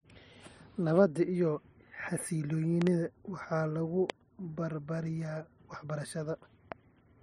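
A loud pop, a double one, strikes at 2.82–2.89 s, just before "waxaa lagu barbaariyaa". Single pops follow at 4.10–4.12 s, right after "waxaa lagu", and at 6.72–6.74 s. The likely cause is a voltage pulse from a switch or static, peaking roughly 15–20 dB above the speech. Each shows as a tall waveform spike and a thin vertical broadband stripe on a spectrogram, with the speech continuing underneath.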